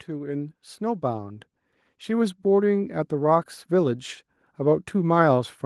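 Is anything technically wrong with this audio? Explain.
Yes. Automatic gain rising runs from 0.05 to 3.14 s: the gain control judged the input too quiet and kept raising its gain, by about 9 dB in total, so the speech and the background noise swell upward together over those three seconds.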